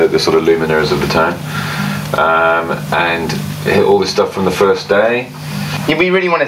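Throughout the clip the level breathes: each loud sound is pulled down, and the quieter stretches and gaps rise back up behind it, a swing of around 20 dB that leaves loud and soft parts squashed close together. This is gain pumping. The likely cause is input gain set far too high for the microphone, with a fast limiter or compressor clamping down on every loud sound and then releasing as the level falls.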